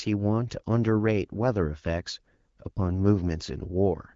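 No technical faults can be heard in this speech clip. It has passed through the AMR wideband (HD Voice) codec at 12.65 kbit/s, which leaves only light coding traces and a top end that stops at about 7 kHz.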